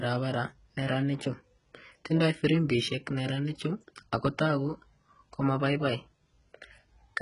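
HE-AAC compression, likely the cause, runs throughout the speech: the treble above the crossover is synthesized by copying lower bands upward rather than coded, so s sounds turn gritty and lispy, nothing reaches past 11 kHz, and the heavy damage fits a bitrate near 12 kbps.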